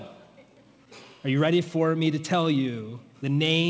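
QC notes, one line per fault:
Nothing stood out on listening, and the audio carries the limited top end expected of a wideband call path.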